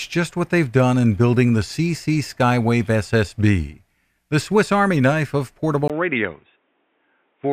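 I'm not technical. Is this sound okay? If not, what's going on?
No. At 5.88 s, right after "knife of", the input switched to a poorer device: a brief gap, then duller, quieter, faintly hissier speech, likely from a lower-quality microphone taking over.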